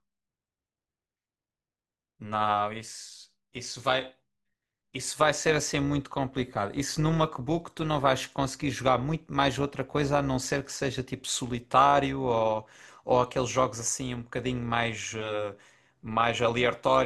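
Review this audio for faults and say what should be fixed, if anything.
Overlap-add ripple runs through the whole speech clip: the level swells and dips by about 6 dB at a rate of around 200 Hz, giving a metallic buzz with extra tones around each note. The frames were windowed and summed back with an overlap whose windows don't add to a flat gain, so every frame boundary leaves a dip. On a waveform the envelope shows a regular scalloped pattern; on a spectrogram, sidebands sit evenly spaced around the harmonics. Pair the window shape with a hop size that satisfies constant overlap-add, or normalise by the summed window.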